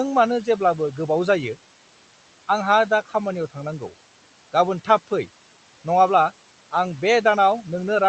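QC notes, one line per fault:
throughout, noise suppressor artifacts: the suppressor drops the room noise by about 12 dB in pauses and lets it return under speech, so the residue pumps; on a spectrogram the noise floor darkens between phrases and fills back beneath them.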